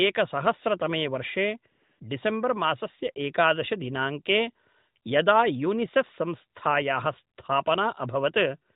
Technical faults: AMR comfort noise

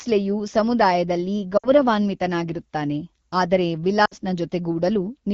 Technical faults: lost AMR speech frames

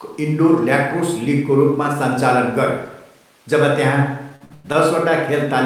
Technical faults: repeated stalls (stutter)

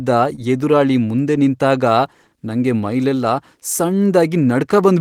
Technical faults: short concealed packet loss

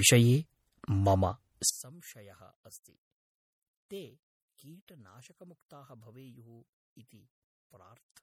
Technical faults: MP3 compression; one channel inverted

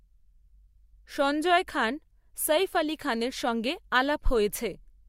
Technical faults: none

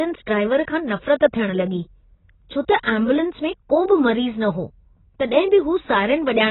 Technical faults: AAC compression; pre-echo

